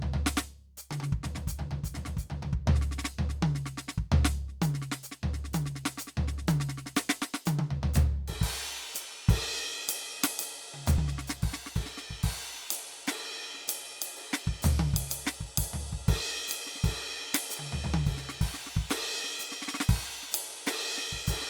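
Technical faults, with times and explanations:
10.98 s, dropped buffer (overrun): the playback jumps forward in the music right here instead of going quiet. Roughly 50 ms of the music just isn't there, and the two sides butt straight together. That's likely the program not collecting its samples in time, so the hardware wrote over that chunk before it could be read.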